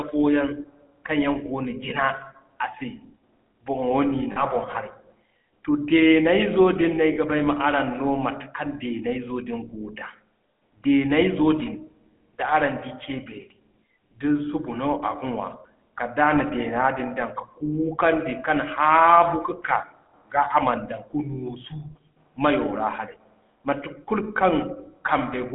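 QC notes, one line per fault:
Throughout, GSM full-rate codec: the speech passes through the original GSM codec, which rebuilds each stretch from a vocal-tract filter excited by a sparse, evenly spaced pulse train, the coarse coding heard here fitting a 13 kbps full-rate stream. The result is a plainly audible buzzy, gravelly grain on the speech, and the band is held to about 200 Hz to 3.4 kHz, so everything sounds thin and boxed-in.
4.32–4.45 s and 7.14–7.17 s, lost GSM frames: at each point the decoder received damaged frames and substituted the parameters of the last good frame. The first gap, before "boŋ harey", lasts about 40 ms, consistent with two dropped 20 ms frames. The second, between "deeney zo din no" and "ba ay ma araŋ", suggests a single frame. Each is heard as a brief rough, metallic smear where the sound should move on.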